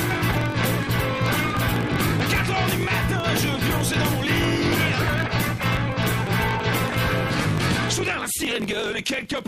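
A block size mismatch with truncation runs through the whole clip, from start to finish. One stage hands over blocks longer than the next stage takes in, and the tail of every block is discarded. Those regular cuts produce a steady buzz at about 45.9 Hz, which fits blocks of 1024 samples. Because material is lost each cycle, the audio runs about 1.07 times fast while staying near its normal pitch.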